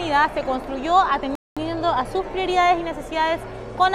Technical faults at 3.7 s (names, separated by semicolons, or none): none